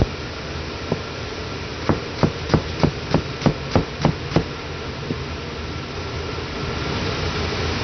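From start to finish the audio carries heavy damage from what is likely MP2 compression. Nothing survives above about 6.2 kHz, so the sound is dull and closed in. The dullness and the depth of the damage fit a low rate near 48 kbps. At that rate the coder splits the signal into sub-bands and cannot feed the upper ones, so they shut off. The bands still running are coarsely quantised. That gives a gurgling, granular roughness throughout.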